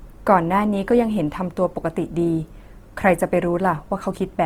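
Speech with plainly audible Opus compression throughout, likely around 24 kbps: a grainy, rough texture rather than MP3's swirl, with content still reaching 20.1 kHz.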